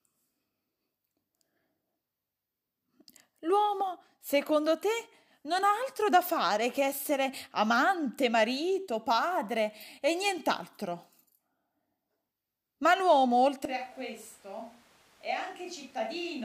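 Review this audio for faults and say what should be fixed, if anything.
From 13.65 s to the end, the speech turns roomy and hollow. Bass thins. Level drops by about 10 dB, and room noise rises to about 25 dB below the speech. The cause is likely a switch to a distant microphone after the close one failed. To prevent it, monitor the close microphone live and record a backup on a separate track.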